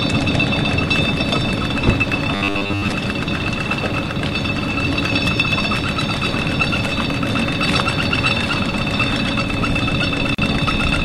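From 2.35 to 2.92 s, robotic sound from repeated short buffers: a rigid 100 Hz buzz, likely from 10 ms chunks looped in place of most incoming audio, unlike a steady tone. At 10.35 s, a gap at a join of encoded pieces: an about 39 ms gap with smeared edges, after which the sound resumes where it stopped rather than skipping ahead.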